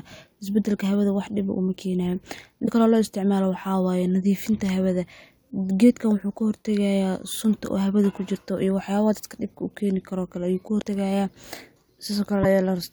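At 2.65 to 2.68 s the speech jumps forward and a brief stretch of corrupted audio, about 30 ms long, sits where the audio should continue. This is a broken MP3 bit reservoir, and the likely cause is frames dropped from the stream. The frame after the gap reaches back for data stored in earlier frames, finds bytes from the wrong frame, and decodes roughly one 26.1 ms frame of nonsense before the audio recovers.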